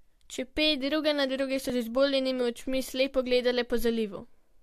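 The clip is speech with one fault: an overlap between stream segments, at 1.70 s. A tiny skip is audible there. The audio arrives in 2-second segments, and the time stamps of two neighbouring segments claim the same short stretch of time. The player trims that shared stretch from one side, but the sound was never really doubled. About 18 ms of real audio is lost. The waveform jumps across the gap.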